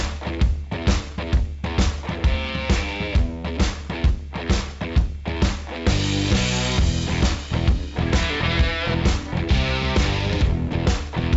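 Nothing technically wrong can be heard in this audio.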